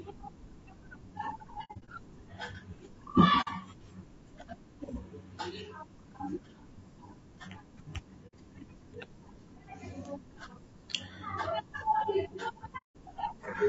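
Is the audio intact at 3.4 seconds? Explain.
No. From 3.41 to 3.48 s there is AAC frame loss with muting: missing frames were decoded as silence, so the sound fades to a soft-edged gap, which fits two lost frames. The waveform tapers to flat, and the spectrogram shows a blank vertical band. The speech is also rough and grainy, with noise between the harmonics, likely from low-delay AAC compression at about 32 kbps.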